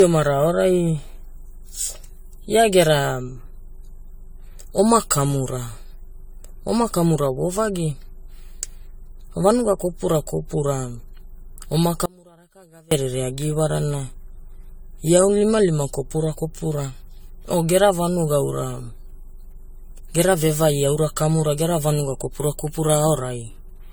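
Throughout the speech there is generation loss. It sounds swirly, hollow and smeared, with blurred attacks, likely from about five passes through AAC-like coding near 64 kbit/s.

From 12.06 to 12.91 s there is an audio dropout to a faint residue. For 0.86 s the speech is cut abruptly, leaving only a faint leak about 30 dB down, likely a break before a live path.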